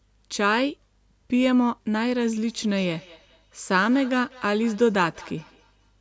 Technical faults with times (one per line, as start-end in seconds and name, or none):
2.42-6.01 feedback echo between two devices